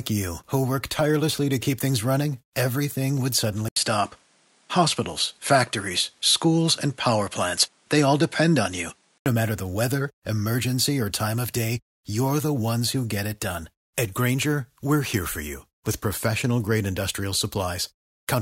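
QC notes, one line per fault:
3.68–9.26 s, input switched to a poorer device: after an 80 ms silence at 3.68 s, the speech loses everything above 11.4 kHz, gains a new noise floor roughly 40 dB below it at about the same level, then clears at 9.26 s, likely from the input moving to another device and back.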